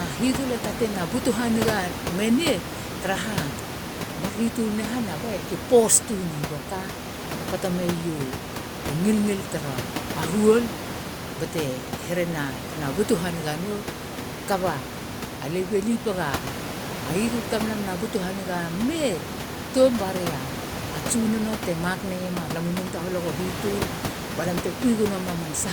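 No technical faults can be heard in the signal, and the room's background noise sits about 10 dB below the speech as part of the recording itself.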